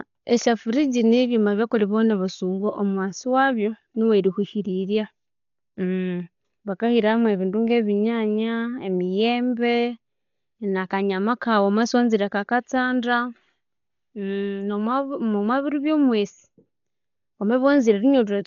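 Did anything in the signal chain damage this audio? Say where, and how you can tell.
Yes: throughout, the speech sounds dull and cut off above 6.9 kHz, with rough fluttering noise on tones, likely Dolby Digital compression at a starved codec bitrate near 40 kbps.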